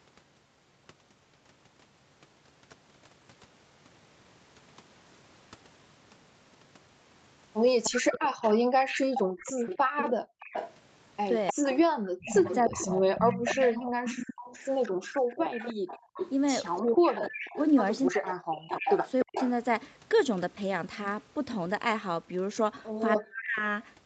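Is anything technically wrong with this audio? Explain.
Yes. Three kinds of echo canceller fault are audible in this speech clip.

Echo leak, 7.83 to 19.51 s and again 23.18 to 23.61 s. A delayed copy of the speech follows the original by about 303 ms. It sits roughly 10 dB below the speech in the long stretch and roughly 15 dB below in the short one. The likely cause is a loudspeaker on the far side whose echo canceller missed part of what its microphone picked up. That residue was sent back down the line.

Background gated by the echo canceller, 8.58 to 10.4 s and 13.9 to 14.05 s. The room sound drops out abruptly, by about 40 dB at its deepest, then returns. In the first span it is gone for roughly 0.7 s in total. In the second the dip lasts about 150 ms. The canceller heard its loudspeaker playing and pulled the microphone down hard. It let go once it judged the echo had passed.

Speech suppressed in double talk, 11.53 to 13.02 s, 14.89 to 19.38 s and 23.2 to 23.63 s. 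The talker's speech dips or cuts out in pieces, by roughly 40 dB at worst. The damage comes to roughly 0.7 s in the first span, about 3 s in the second and under half a second in the last. Both sides were likely talking at once. Unable to tell its own talker from the echo, the canceller turned everything down.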